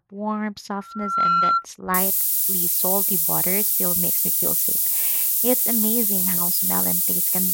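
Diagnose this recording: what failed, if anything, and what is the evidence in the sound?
Loudspeaker feedback squeal occurs in the acoustic loop between microphone and loudspeaker, ahead of any digital stage. From 0.78 s to 1.65 s a single tone at 1.4 kHz swells over roughly 0.4 s and settles at about 10 dB above the speech. A steady interfering tone or hum would not do this. Here the loop gain at that one frequency passed unity, so the tone fed itself and kept growing until the squeal stopped.

Low bit depth with noise shaping enters at sample-format conversion. From 1.94 s to the end a thin, constant hiss sits about 10 dB above the speech and is concentrated strongly toward the top of the band. Analogue or microphone noise would be broader and flatter and would not switch on abruptly. The audio was requantised to only 3 bits, and the rounding error was fed back and pushed upward in frequency.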